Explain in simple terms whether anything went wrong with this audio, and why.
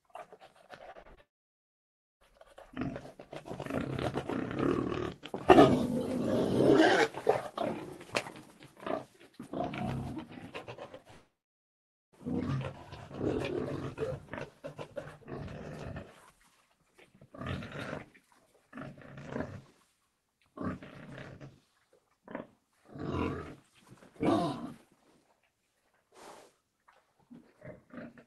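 Short concealed packet loss: small pieces of the call's data arrived too late to be played, so the receiver guessed at the missing sound by stretching out what came just before and then blending back into the real audio. This happens at 0.91–0.97, 1.03–1.07 and 1.15–1.19 seconds, and again at 10.92–10.95 and 10.97–11.01 seconds. Each gap is only 20 to 40 milliseconds, so it comes across as a quick smear or wobble rather than a clear gap.

Long network dropout: twice, the audio stopped arriving for about a full second, likely because the network connection stalled. The first time runs from 1.21 to 2.22 seconds, right after the earlier small glitches. The second runs from 11.11 to 12.14 seconds, again just after a cluster of small ones. Each time, the last sound trails off briefly and then there is near-silence, almost all of the first second and about 0.86 seconds of the second. The audio then picks up again, but what should have been heard in between is simply gone.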